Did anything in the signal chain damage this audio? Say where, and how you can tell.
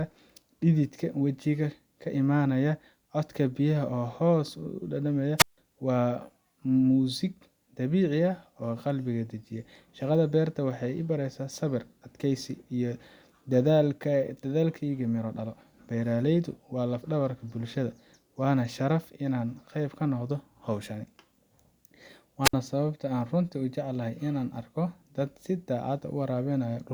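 Yes. A wireless microphone squelch dropout hit the radio link at 5.37–5.58 s (before "waa muusig") and 22.43–22.54 s (before "sababta aan runtii u"). Hiss rises as the signal fades, then the receiver mutes for 158 ms and 60 ms. A network gap would have no hiss.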